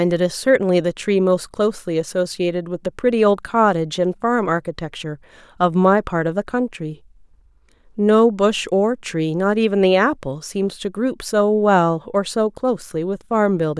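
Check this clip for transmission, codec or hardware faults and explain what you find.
Nothing here needs flagging; I listened through the whole recording and didn't catch any transmission, codec or hardware trouble anywhere along the way.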